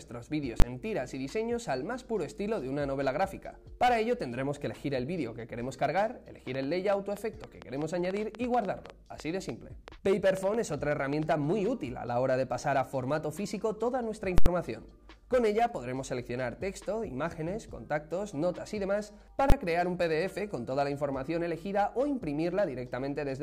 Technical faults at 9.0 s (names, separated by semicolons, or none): train of clicks